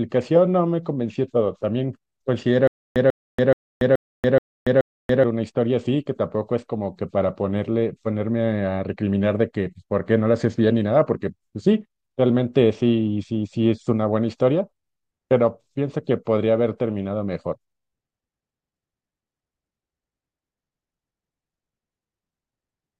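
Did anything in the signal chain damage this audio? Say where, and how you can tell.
Yes. From 2.68 to 5.24 s there is a stutter with silent gaps. The same 143 ms burst of speech returns six times, every 427 ms, with 284 ms of digital silence between. This likely comes from a stalled playback or stream buffer replaying its last fragment.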